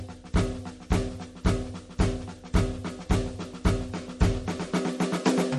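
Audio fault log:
throughout MP3 compression: The music was likely squeezed through an MP3 encoder starved of bits, at a rate that fits about 48 kbps, so it discarded weak frequency lines and cut the treble. Nothing remains above 12.6 kHz, which leaves the top end dull, and the damage is plainly audible: detail that the encoder dropped and restored from frame to frame gives the music a watery, swirly texture, and sharp attacks come out smeared.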